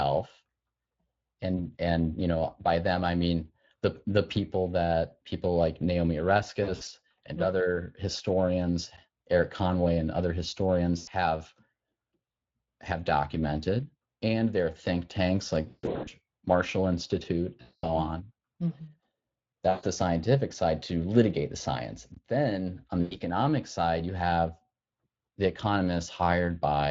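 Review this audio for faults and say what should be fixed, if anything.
Speex codec damage runs through the whole clip at roughly 20.6 kbps and is plainly audible. The encoder has too few bits to model the excitation signal, so the speech takes on a hoarse, grainy, noisy texture. Encoding the source at a higher Speex quality setting, or with a more modern codec such as Opus, would avoid this.

VoIP packet loss concealed by the speech codec occurs at 1.57–1.60 s (just before "and you know by"), 6.63–6.88 s, 10.97–11.09 s, 15.67–16.1 s (just after "are think tanks like"), 17.61–17.87 s, 19.69–19.85 s (just before "the scientific side to") and 23.01–23.17 s. Each time, the decoder stretches the last pitch and filter into a sound that fades. The longest drops, of about 320 ms and 220 ms, leave the sound weak for a moment after packets resume. A larger jitter buffer, forward error correction or a more reliable network path would prevent these losses.

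A block of digital silence cuts in at 8.97 s and at 22.14–22.17 s. The output drops abruptly to silence and back, leaving a tick or dip at 8.97 s and a short hole at 22.14 s. The gap lengths, about 11 ms and 21 ms, fit 512-sample and 1024-sample buffers that were not filled in time. Giving the audio thread higher priority or using larger output buffers would prevent these underruns.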